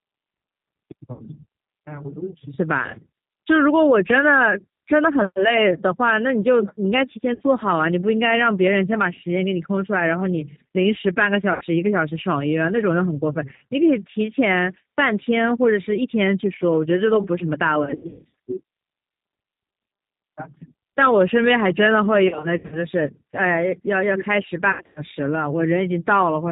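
Throughout, the G.729 codec at 8 kbit/s leaves plainly audible roughness and a synthetic edge. A spectrogram shows nothing above 4 kHz. VoIP packet loss concealed by the speech codec occurs at 1.13–1.23 s, 7.34–7.42 s, 11.53–11.64 s, 17.85–18.30 s, 22.28–22.86 s and 24.72–25.01 s, with 60, 60, 80, 300, 220 and 200 ms lost. The decoder stretches the last sound into a fading buzzy tone or coloured noise. On a waveform this shows as repeated, decaying cycles, and the spectrogram shows smeared harmonics, patchy in the later scattered bursts.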